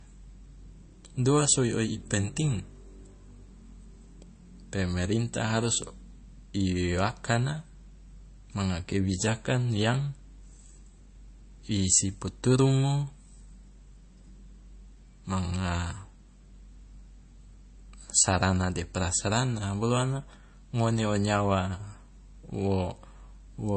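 From start to finish the speech carries plainly audible damage of the kind left by MP3 compression, likely from an encoder starved of bits, in line with a bitrate near 33 kbps. Nothing survives above 8.3 kHz, so the top octave is simply gone and sibilants sound dull. Weak frequency lines drop in and out between frames, giving a watery, swirling texture with metallic chirps on s sounds, and consonant onsets smear rather than landing cleanly.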